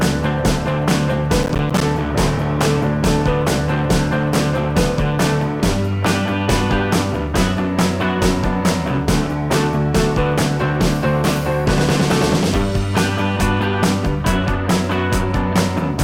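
From 1.43 to 1.81 s a burst of processor overload crackle tears through the sound: around seven buffers of roughly 10 ms each arrive late and drop to silence, leaving hard-edged gaps that, unlike a single dropout, cluster into gritty crackle until the load eases.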